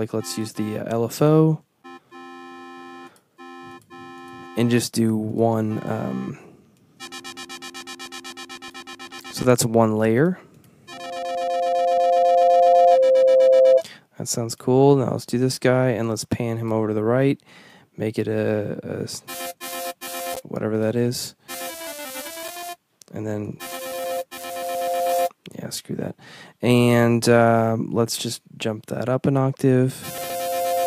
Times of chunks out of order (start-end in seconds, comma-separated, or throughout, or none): 30.18-30.30